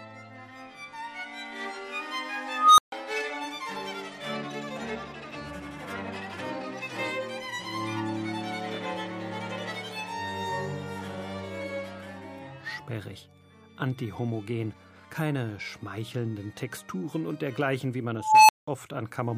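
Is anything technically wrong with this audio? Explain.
Yes. An unstable filter fails twice, from 2.49 to 2.92 s and from 18.13 to 18.67 s. A recursive filter running with bad coefficients feeds its own output back with too much gain, so a tone grows without limit until it clips and the arithmetic overflows. The first squeal, around 1.5 kHz, swells over 294 ms and is followed by 142 ms of silence. The second, nearer 1 kHz, swells over 363 ms, then drops out for 186 ms until the filter resets.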